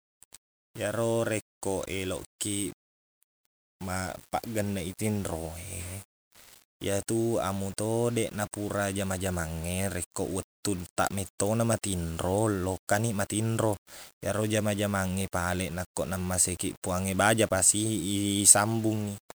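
Speech with a grainy, gritty distortion running the whole way through, worst in the quiet bits and trailing ends where the sound breaks up and sputters. That's likely low bit depth without dither, roughly 8 bits rounded, leaving error only about 25 dB down.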